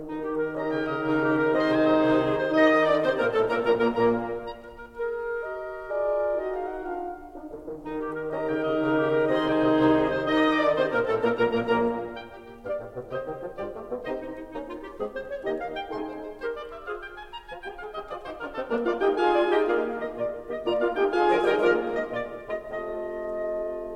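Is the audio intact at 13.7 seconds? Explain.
Yes, the music plays through 13.7 seconds without any audible technical fault at that moment.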